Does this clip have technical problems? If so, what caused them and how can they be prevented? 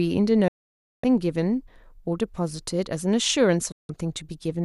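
Yes, there are two digital broadcast dropouts in this speech. The sound snaps to silence in about 3 ms at 0.48 s and stays gone until 1.04 s, roughly half a second. A shorter hole runs from 3.72 to 3.90 s. In each case the receiver stopped getting frames it could trust and muted until clean ones arrived, so whatever was spoken during those gaps is lost. To prevent it, give the receiver a stronger signal with a better antenna or placement, or use a link with more error protection.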